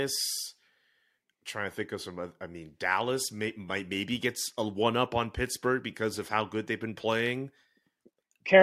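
Nothing goes wrong anywhere in this bit of speech, so there's no fault to point to.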